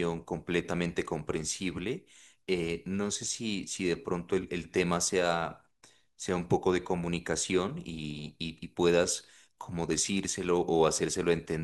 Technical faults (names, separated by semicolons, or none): none